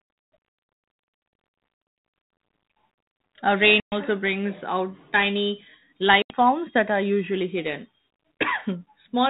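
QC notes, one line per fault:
3.80 to 3.99 s and 6.22 to 6.31 s: packet loss on an ADPCM call. Sound drops to hard-edged silence for about 120 ms, then about 80 ms, each a run of several lost packets. It resumes on "brings out tiny", and later on "forms that are usually". The decoder's adaptive predictor and step size have drifted from the sender's, so each restart distorts slightly and briefly before settling. The narrowband G.726 ADPCM sound fits 32 kbit/s.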